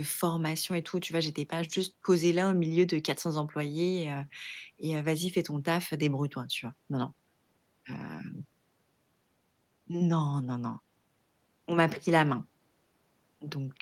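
No technical faults can be heard anywhere in the recording.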